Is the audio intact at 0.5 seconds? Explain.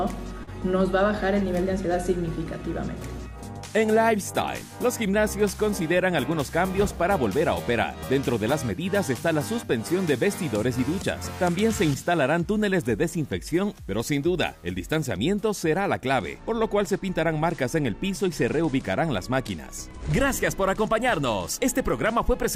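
No. From 0.43 to 0.50 s there is short concealed packet loss: about 40 ms of audio arrived too late, and the receiver covered roughly 35 ms by extending the preceding sound before blending back. Unlike a plain dropout's silent gap or click, this brief smear keeps the sound continuous.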